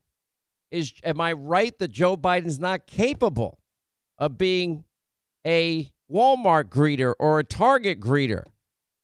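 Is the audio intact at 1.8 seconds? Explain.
Yes, the speech at 1.8 seconds plays through intact, with no audible fault at that moment.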